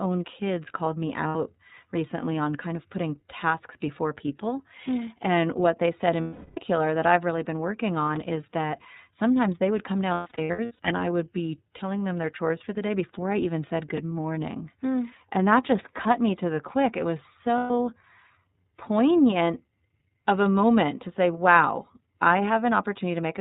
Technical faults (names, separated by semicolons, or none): iLBC codec; lost iLBC frames